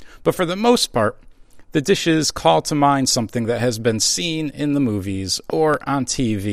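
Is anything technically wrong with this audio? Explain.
Yes. A loud pop sits between 5.50 and 5.76 s. It likely comes from a sudden voltage step or pulse, such as a plug, switch or static discharge, entering the signal chain. It is heard as two sharp pops in quick succession, about 10 dB above the speech, which carries on underneath.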